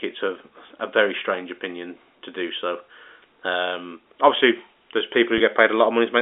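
At 5.38 to 5.40 s, just after "obviously there's", a short run of audio data never reached the receiver. The gap, about 20 ms and consistent with a single lost packet, was covered by packet loss concealment with pitch repetition: the decoder looped the last pitch period of the speech. Because the gap is this short, the repetition doesn't fade to silence. It comes across as a brief held, slightly buzzy moment in the voice, heard through the narrow 300 to 3600 Hz band of the G.711 telephone line.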